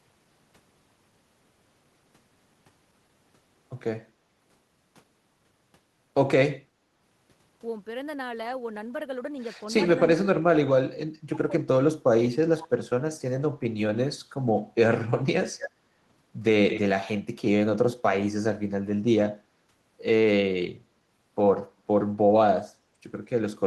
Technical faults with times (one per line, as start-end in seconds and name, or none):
9.78-12.75 speech suppressed in double talk
15.04-15.19 speech suppressed in double talk
15.58-15.63 speech suppressed in double talk
15.59-15.70 echo leak
16.70-16.80 echo leak
19.43-19.48 speech suppressed in double talk